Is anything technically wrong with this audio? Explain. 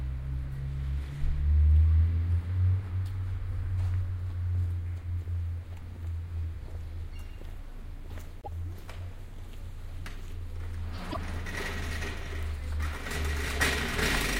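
Yes, there are two short glitches in these everyday sounds, at 8.41 to 8.48 s and again at 11.10 to 11.17 s. Each lasts about 64 ms, and the sound briefly garbles before carrying on a little further along. The likely cause is a broken MP3 bit reservoir. Once frames drop out, the next frame reaches back for borrowed data and decodes the wrong bytes. A span that long fits two or three 24 ms frames decoding badly.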